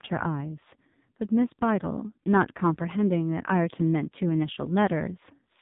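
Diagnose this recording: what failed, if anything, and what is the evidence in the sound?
Codec stage: AMR narrowband mobile codec throughout, with nothing above 3.8 kHz and a heavily buzzy, synthetic speech quality, which fits a low AMR-NB mode near 5.9 kbps.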